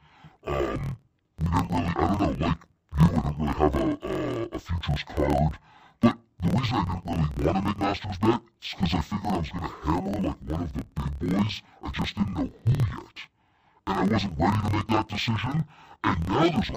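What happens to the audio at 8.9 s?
The speech is interleaved audio read as planar throughout. Each 26 ms block plays at half speed. It sounds an octave low, chopping at 38 Hz.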